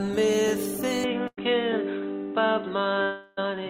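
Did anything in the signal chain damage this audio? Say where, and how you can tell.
Yes. From 1.04 s to the end the sound abruptly goes duller and boxier, with nothing above 3.9 kHz, and a faint new background noise sits well under the signal. There's no gap at the change and the level stays the same. This points to the capture stage: the input was likely switched to a poorer device, such as another microphone or a headset's call profile, whose narrower band and own noise floor replace the original chain.

At 1.27 to 1.39 s the sound briefly freezes into a held, fading continuation for about 100 ms, then picks up again further along with that stretch missing. This is a burst of packet loss on the network path. Several packets in a row never arrived in time, so the receiver stretched the last sound it had, turning it down across the gap, and then resumed from the next packet that did arrive.

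From 3.02 to 3.39 s a longer hold sets in. The last sound carries on and fades for roughly a third of a second, never reaching true silence, and when the audio returns about 340 ms of it is gone. This is most likely a long network dropout. Nothing arrived for that whole stretch, so the receiver filled it with a decaying continuation of the last sound until the stream came back.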